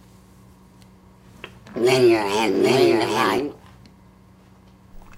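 From 2.21 to 3.39 s there's a doubled audio track: a full-band copy trails about 0.7 s behind at around 5 dB down, likely from a second, slower capture path.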